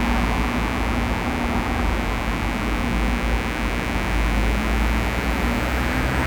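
A mains buzz runs through the whole clip. It is tied to a 60 Hz supply. Sharp switching spikes, twice per cycle, leaked into the signal. Their harmonics reach several kilohertz. The result is a steady, raspy buzz, roughly 10 dB below the sound.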